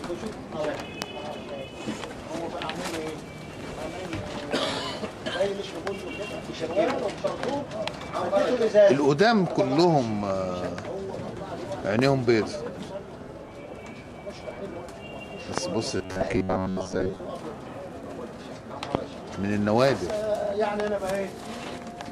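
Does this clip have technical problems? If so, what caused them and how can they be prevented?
Yes. Four loud pops sit on top of the sound at 1.02 to 1.04 s, 11.99 to 12.01 s, 15.58 to 15.60 s and 18.95 to 18.97 s. Each is a single sharp crack, the first about 25 dB above the surrounding level and the others about 20 dB, with the audio continuing underneath. The likely cause is a brief voltage spike entering the chain, from a connector, switch, static discharge or driver glitch, which the downstream circuitry turns into an audible click. To prevent them, secure cables and connectors, avoid switching or touching gear while recording, and keep audio drivers stable and up to date.

From 15.97 to 17.20 s the sound turns into a rigid, metallic buzz pitched at 93.8 Hz that only roughly tracks the underlying audio: robotic sound from repeated short buffers. About half of the material in that stretch is repetition. 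Fresh audio was likely arriving too slowly, so the system replayed its last chunk to fill the gaps while the real audio was lost. The 93.8 Hz buzz points to chunks of roughly 10.7 ms. To prevent it, enlarge the audio buffer or reduce CPU and network load.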